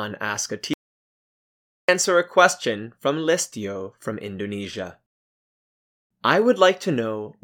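At 0.74 s the speech cuts out abruptly and does not return until 1.89 s. That is an audio dropout to silence lasting about 1.15 s. The gap is silent, with no room tone or background hiss. The input signal was likely lost briefly, through a disconnected source, a failed link or an accidental mute, while recording carried on writing silence. Whatever was spoken in that stretch is gone.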